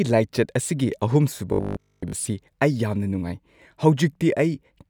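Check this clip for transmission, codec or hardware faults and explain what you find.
One fault: from 1.53 to 2.13 s, robotic sound from repeated short buffers, likely a starved stream looping about 20 ms chunks for most of that stretch, imposing a rigid 50 Hz metallic buzz on the speech.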